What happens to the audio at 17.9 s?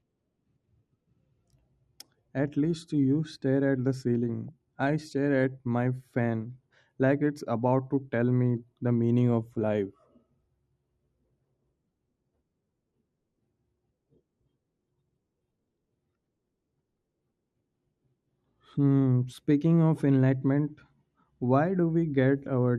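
At 17.9 s the speech carries the same dull, gurgling, granular texture heard across the whole clip, most likely MP2 compression at a low rate, consistent with about 80 kbps. Layer II divides the spectrum into 32 equal sub-bands and, short of bits, shuts off upper bands and quantises the rest coarsely. Unlike a simple low-pass filter, the missing top flickers in and out rather than staying cleanly cut, and the grain is rougher than MP3's swirling.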